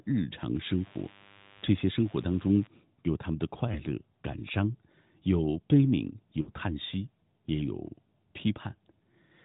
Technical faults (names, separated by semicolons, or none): lost AMR speech frames